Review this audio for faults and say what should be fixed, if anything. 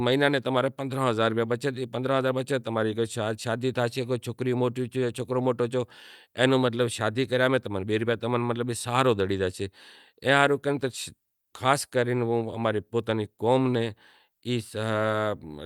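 No faults found; nothing here needs fixing.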